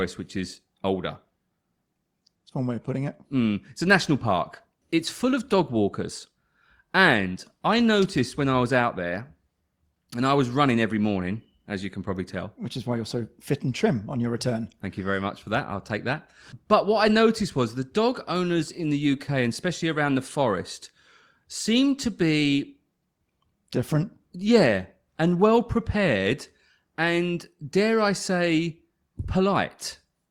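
No technical faults can be heard anywhere in the recording.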